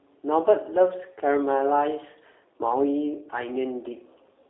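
G.729 codec coding runs through the whole of this speech clip, from start to finish, and the damage is plainly audible. The sound is confined to a telephone band of roughly 300 Hz to 3.6 kHz, and the slightly rough, synthetic texture comes from speech rebuilt from a vocal tract filter, a pitch predictor and a few pulses per 10 ms frame, which fits an 8 kbit/s G.729A link.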